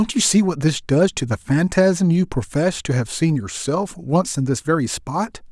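No technical faults can be heard anywhere in the recording.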